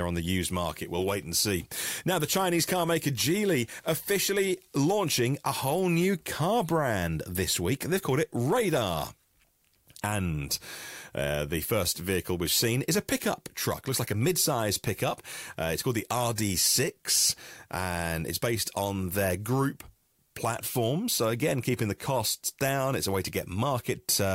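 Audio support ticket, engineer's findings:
Listened to the whole speech recording and found nothing to flag, so no faults to report on this one.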